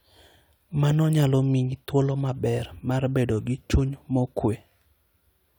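Speech recording, no audible technical faults anywhere in it.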